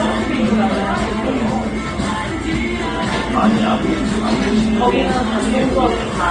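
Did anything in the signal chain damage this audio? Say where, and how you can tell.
Yes, at the codec stage. The damage is likely transcoding between lossy codecs: the audio seems to have been encoded at a low bitrate several times over, with the artefacts of one codec stacked on another. Throughout the clip the top end is cut off. The different codecs' artefacts are heard together. The mix of codec signatures fits an AAC-to-Vorbis-to-Opus chain at roughly 32 to 36 kbit/s, with the narrowest band limit surviving every generation.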